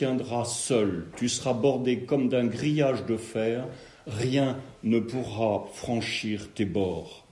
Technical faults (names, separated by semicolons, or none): none